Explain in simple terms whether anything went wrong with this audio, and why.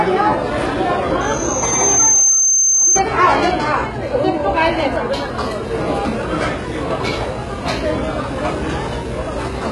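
Yes, two things went wrong. From 1.23 s to 3.01 s there is a loudspeaker feedback squeal: a single high tone near 6.2 kHz swells over about a second until it is louder than the sound itself. A microphone was picking up its own loudspeaker. Unlike a steady interference whine, it grows by itself.

Throughout the clip, the treble sounds gritty and metallic, with nothing above about 11.4 kHz. This is likely heavy HE-AAC compression, which rebuilds the top end from copies of lower bands. Unlike plain muffling, the treble stays bright but sounds false.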